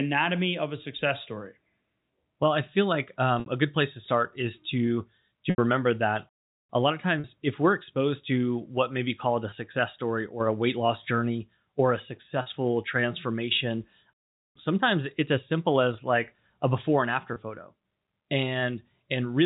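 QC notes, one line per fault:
3.40 to 17.36 s, packet loss with pitch repetition: at 3.40, 5.50, 7.20, 9.50, 12.42 and 17.34 s the sound briefly holds on a slightly buzzy, frozen tone. The gaps last 60, 80, 40, 20, 40 and 20 ms, which fits lost 20 ms packets. The receiver bridges each dropout by repeating the last pitch period and fading it. The 80 ms gap at 5.50 s holds longest, and all sit within the narrow telephone band.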